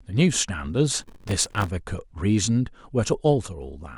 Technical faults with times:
0.99-1.68 processor overload crackle

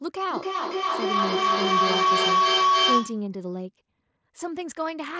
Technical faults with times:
0.31-3.34 feedback howl

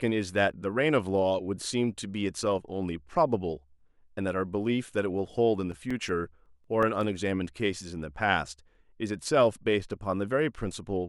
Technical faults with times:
5.53-7.01 CD scratch ticks

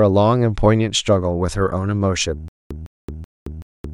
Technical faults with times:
2.48-3.94 stutter with silent gaps

